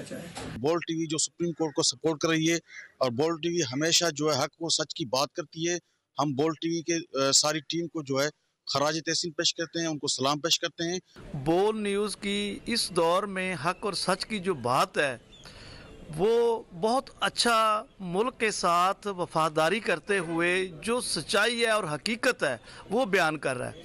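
No technical faults are audible.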